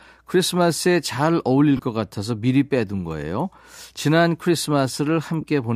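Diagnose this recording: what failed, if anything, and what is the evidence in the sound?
The failure is at the codec stage, over a Bluetooth link: lost LE Audio frames. Two brief dropouts occur, at 1.77 to 1.79 s and at 5.41 to 5.43 s. Each gap becomes a short noisy smear instead of clean speech. The concealed stretches are about 22.5 ms and 15 ms, which fits three and two lost 7.5 ms LC3 frames. The decoder filled each gap by repeating the last spectrum with randomised signs. The result is noise shaped like the preceding sound.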